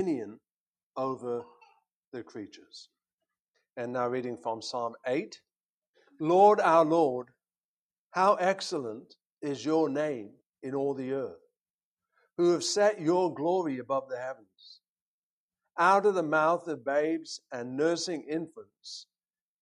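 Nothing technically wrong turns up anywhere in this audio, so there's no fault to point to and no cause to explain.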